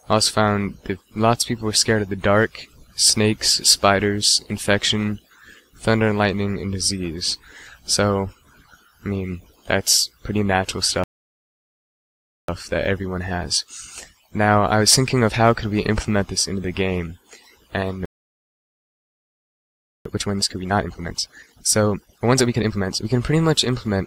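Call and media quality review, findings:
Playback stall at 11.04–12.48 s (about 1.45 s) and 18.05–20.05 s (2.0 s): sound just cuts out mid-flow and sits silent. Player side, likely starved of data or its thread got blocked until it recovered.

Time-compressed catch-up right after each: 12.48–15.48 s at 1.1x, then 20.05–23.05 s at 1.5x, so the second is noticeably more rushed. Pitch stays put. Player is draining the backlog by snipping small chunks and cross-fading them.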